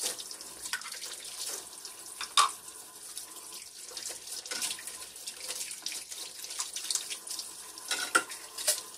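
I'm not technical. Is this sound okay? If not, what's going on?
Yes, no faults heard.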